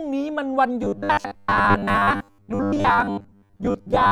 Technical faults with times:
0.82-4.11 robotic sound from repeated short buffers

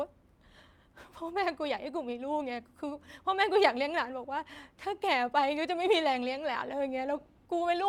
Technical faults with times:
none

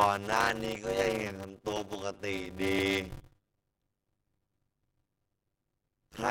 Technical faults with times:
0.00-6.31 block size mismatch (padded)
0.75-5.85 periodic USB or driver dropouts

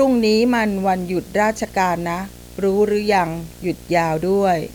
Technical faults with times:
0.00-4.75 video or display buzz

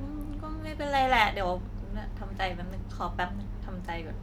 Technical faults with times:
none

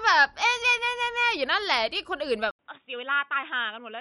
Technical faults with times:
0.00-4.01 MP3 compression
2.51-4.01 input switched to a poorer device

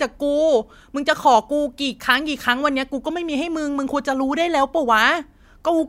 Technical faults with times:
none

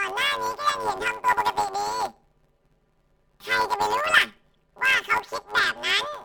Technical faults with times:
0.00-6.24 planar audio read as interleaved

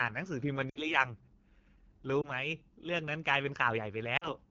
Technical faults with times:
0.00-4.50 AMR wideband (HD Voice) codec
0.69-1.05 lost AMR speech frames
2.21-2.31 lost AMR speech frames
4.18-4.33 lost AMR speech frames

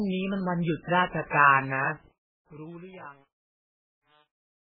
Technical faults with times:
0.00-4.71 MP3 compression
1.89-4.71 truncation distortion on a fade

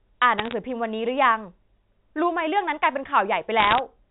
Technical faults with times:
0.38-0.54 bit errors on a digital phone line
3.59-3.79 bit errors on a digital phone line

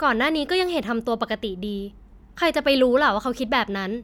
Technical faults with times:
none

